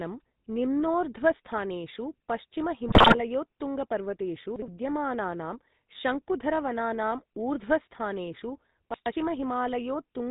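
GSM full-rate codec throughout: the sound is cut off above 4 kHz and driven by coarse pulse excitation, which fits the 13 kbps coder, leaving a plainly buzzy, gravelly roughness.

GSM bit errors from 2.88 to 3.17 s: corrupted filter, pitch and gain values distort successive frames, so the speech breaks into squawks, pops and gargling.

Chunks out of order from 8.94 to 9.12 s, just after "विद्यमानानां शङ्कुधरवनानाम् ऊर्ध्वस्थानेषु": a 60 ms chunk plays two chunks late, leaving a jumbled moment with three hard joins.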